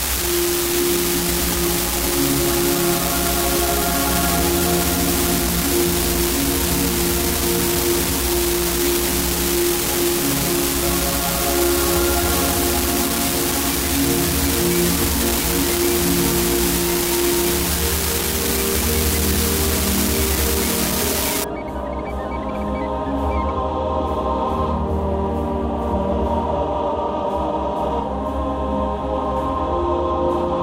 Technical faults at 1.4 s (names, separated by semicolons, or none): unreliable data bit